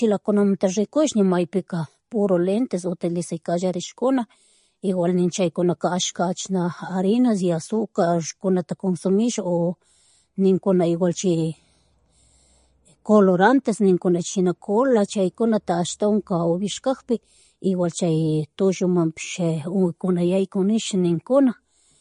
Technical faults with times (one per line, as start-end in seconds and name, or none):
0.00-22.01 MP3 compression